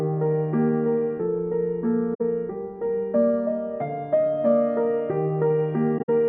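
AAC frame loss with muting opens a hole from 2.14 to 2.21 s, about 64 ms, consistent with three lost frames, and again from 5.98 to 6.09 s, where about 85 ms goes missing in gaps scattered over roughly 107 ms, the longest run near 70 ms. The decoder zeroed the missing spectra, and the overlapping windows fade the sound out and back in at each edge, so the dropouts are soft-edged silences.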